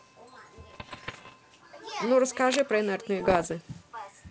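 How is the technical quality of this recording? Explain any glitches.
The recording has two bursts of digital crackle and one brief scratching sound, heard over a G.722-style wideband telephone sound that stays clear up to about 7 kHz.

From 0.70 to 1.34 s, and again from 3.20 to 3.52 s, pops and rough, gritty bursts break up the speech, with brief jumps in level. These are bit errors on an ADPCM link. The first burst corresponds to roughly 1 percent of bits flipped and the second to somewhat fewer. Each corrupted bit throws off the decoder's step size and prediction, so the disturbance rings on for a few milliseconds instead of staying a single click.

From 2.45 to 2.63 s, a dense, uneven rustle sits only a little below the speech level. This is cable scratch noise, likely caused by a worn cable, connector or control being moved, which makes its contact resistance flicker rapidly.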